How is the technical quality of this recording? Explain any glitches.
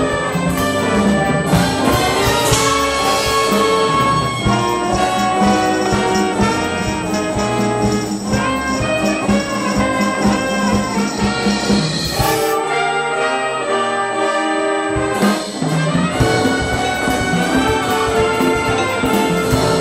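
The recording has a clear technical fault. USB whine runs throughout: a steady 8 kHz tone, roughly 20 dB below the signal, from the bus's 125-microsecond microframe current draw leaking through power or ground.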